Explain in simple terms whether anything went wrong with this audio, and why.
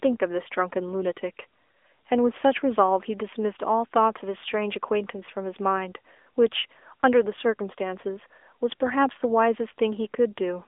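Something did go wrong, and it runs through the whole recording: the speech has been squeezed through the AMR narrowband mobile codec, the coder used on older 2G and 3G phone calls. Only a thin slice of sound survives, roughly 300 Hz up to 3.5 kHz, so the voice loses its depth and sparkle. The codec rebuilds the voice from a rough model in small chunks, and that leaves a plainly audible, buzzy, processed edge.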